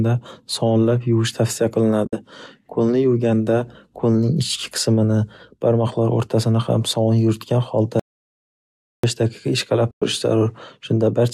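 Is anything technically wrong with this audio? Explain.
Yes, the speech has two kinds of fault.

AAC frame loss with muting occurs at 2.05–2.13 s, where about 70 ms is missing within an 80 ms stretch, and again at 9.91–10.02 s, about 110 ms. The decoder lost frames and zeroed their spectrum, which fits runs of short 10 ms low-delay frames. The overlapping windows fade the sound out and back in, leaving soft-edged holes.

An audio dropout to silence runs from 8.00 to 9.04 s, roughly a second, and was likely caused by the input being lost while the recorder kept writing zeros. The sound cuts off mid-flow into silence with no room tone, and whatever occurred during that second is gone.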